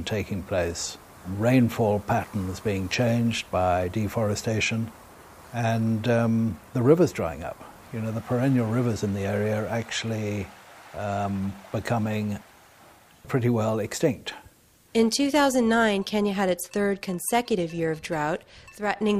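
Nothing goes wrong anywhere in this one, as far as the ear can tell, so there's no fault to point to at any moment.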